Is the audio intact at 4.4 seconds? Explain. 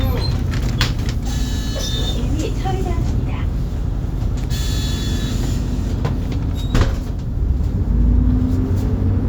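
No. At 4.43 s an electrical switching spike cuts in, a sharp snap of only a few milliseconds peaking around -20 dBFS. It is likely a nearby switch arcing into the line, sitting on top of the sound rather than replacing or gapping it as a dropout would.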